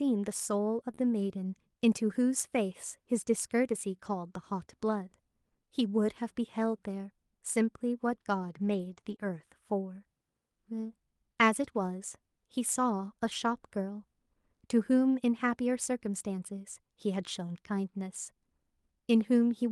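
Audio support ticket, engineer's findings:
0.91–0.99 s: short concealed packet loss. Brief smear, about 40 ms in two consecutive 20 ms holes. Jitter buffer/decoder PLC extends the last sound, then crossfades back. Unlike FEC recovery, this is extrapolated, not decoded.

4.05–4.15 s: lost packet rebuilt from error correction. No gap, but about 60 ms turns rougher and noisier, which fits three 20 ms frames played from Opus in-band FEC copies. Unlike concealment, the content is preserved rather than smeared or dropped.

8.61–9.30 s: scattered short gaps. A few separate ticks and hiccups, roughly three, none much over 15 ms, spread across the span, with a small share of it patched. Receiver PLC fills each hole independently. Isolated and spaced, not one continuous smear.

Call path: Opus, with content topping out near 12 kHz, consistent with its bandwidth setting.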